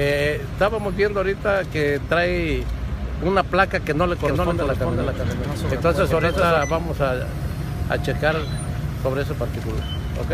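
From 4.20 s to 6.58 s a doubled audio track appears: a second, full-band copy of the sound trails the original by roughly 400 ms at a level a few dB lower. It was likely caused by the signal being captured twice through paths of different delay. Unlike an echo or reverb, the copy has no decay, no room colouring and no further repeats, and it switches in and out abruptly at those two times.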